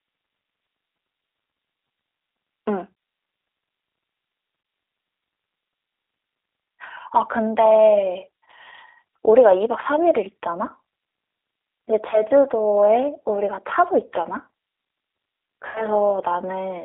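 Throughout the clip, the speech has plainly audible G.729 codec damage, which fits an 8 kbit/s stream. It sounds rough and synthetic within a 300 Hz to 3.6 kHz band. Plain band-limiting would stay smooth.

VoIP packet loss concealed by the speech codec occurs three times. About 20 ms are lost at 4.63 s and again at 12.11 to 12.21 s, and 80 ms at 15.67 to 15.86 s. In each case the decoder stretches the last sound into a fading buzzy tone or coloured noise that leaves the voice weak or distorted afterwards, rather than leaving a silent dropout.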